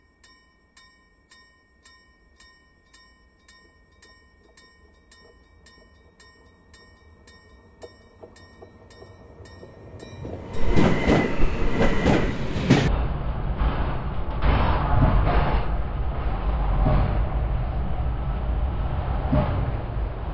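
From 12.88 s to the end, everything drops sharply in pitch, about 19 semitones, and crawls at one third of its proper speed. This is a wrong sample rate fault: samples played back without conversion, at a rate that fits 48 kHz material run at 16 kHz.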